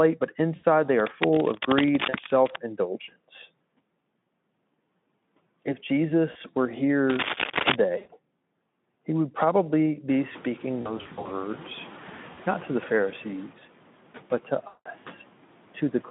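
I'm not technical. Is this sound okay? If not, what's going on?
No. Two things went wrong.

There are noise suppressor artifacts throughout. A noise-reduction stage keeps pushing down whatever it judges to be steady background noise, so the hiss dips in the pauses and swells back under the speech. The room noise gets louder around 10 s.

There is also VoIP packet loss concealed by the speech codec. Chunks of the call never arrived, so the decoder guessed by stretching the last bit of voice it had into a buzzy tone or a noise that fades. You can hear this at 0.55 to 0.65 s, 2.09 to 2.18 s, 6.31 to 6.37 s, 7.97 to 8.11 s, 10.81 to 11.34 s (many short gaps close together), 12.33 to 12.40 s and 14.67 to 14.90 s. The voice stays weak or distorted for a short while after each one.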